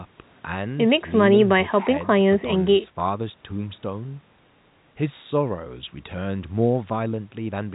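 No technical faults can be heard anywhere in the speech. It comes through G.711 telephone coding, so nothing rises above 3.8 kHz, and the coding's quantisation noise is faint at most.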